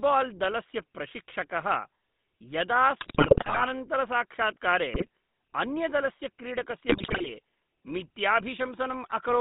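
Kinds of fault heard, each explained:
GSM full-rate codec: throughout, a buzzy, gravelly texture from pulse-driven vocal-tract coding, with the band held to roughly 150 Hz to 3.7 kHz.
GSM bit errors: at 3.0–3.67 s, 4.92–5.08 s and 6.88–7.3 s, corrupted decoder parameters break the speech into squawks, pops and gargling bursts.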